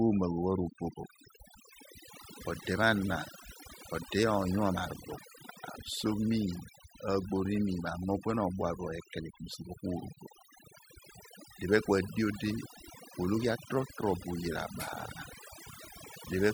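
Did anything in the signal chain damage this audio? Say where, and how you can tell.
Yes. The damage is in the processing stage: overdone noise removal, running the whole way through this speech clip. You can hear it in the gaps, where the background drops to near silence but keeps twinkling with little specks. The suppressor was set too hard, so any frequency band that sat close to its noise estimate got pulled way down or shut off, and the quieter parts of the speech went with it.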